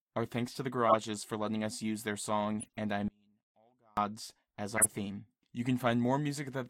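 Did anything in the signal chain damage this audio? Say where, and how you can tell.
Yes. At the codec stage, corrupt frame decoded: short bursts at 0.89–0.95 s (peaking near about -15 dBFS), 2.60–2.77 s (weaker, about -30 dBFS) and 4.77–4.86 s (about -10 dBFS). Damaged frames were decoded anyway, so misread gains and codes scatter energy into chirps and noise for a few frames each.

From 3.08 to 3.97 s there is an audio dropout to a faint residue: the speech cuts abruptly for 0.89 s, leaving only a faint trace about 35 dB below normal. The downstream path stayed live, so the likely cause is a lost input or transport feed rather than a pause.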